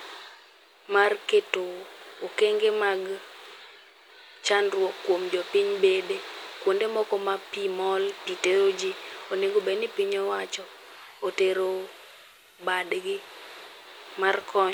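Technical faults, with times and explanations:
10.52–14.11 s, digital radio blending to analogue: just after "ni piny" the receiver loses the digital stream and cross-fades over about 0.5 s to the FM broadcast, so hiss rises to roughly 35 dB below the speech, and level drops about 2 dB.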